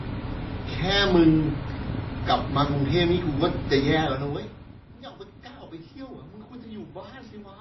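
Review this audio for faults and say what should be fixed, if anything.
Throughout the speech there is a watery, swirly texture, and nothing is heard above 5.8 kHz. Likely cause: MP3 compression at a very low bitrate, consistent with roughly 23 kbps, which makes the encoder cut the treble and zero weaker frequency lines frame by frame. To prevent it, encode from the original at a much higher bitrate or keep a lossless copy.

From 1.81 s to 7.53 s, a train of clicks ticks over the speech and its pauses at an uneven pace of about 10.5 per second, around seventy in all, peaking a few decibels above the speech. This is likely interference or a faulty connection or power supply injecting repeated pulses. To prevent it, isolate the recording chain from nearby equipment and check the interface and its cabling before recording.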